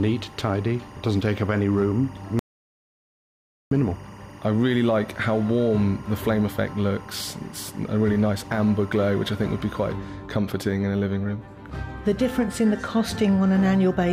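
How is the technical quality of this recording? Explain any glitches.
Two faults affect the recording: a chirping interference layer and a brief total cutout.

From 0 to 9.89 s there is timecode bleed: a warbling chirp alternating near 1 kHz and 2 kHz, roughly 25 dB below the sound. The code leaks from a neighbouring line and fits 23.976 fps timecode. Its two-pitch switching sets it apart from a steady hum or whine.

From 2.39 to 3.71 s there is an audio dropout to silence lasting 1.32 s. The gap is complete silence with no room tone left, unlike a noise gate, which leaves some room tone. The likely cause is a lost input while recording continued.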